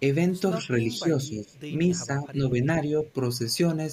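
Speech that dips twice: from 0.59 to 1.55 s it drops by roughly 10 dB, then from 1.9 to 2.65 s by a shallower 5 dB or so. This is likely speech suppressed in double talk, with the echo canceller turning the talker down while the far end spoke.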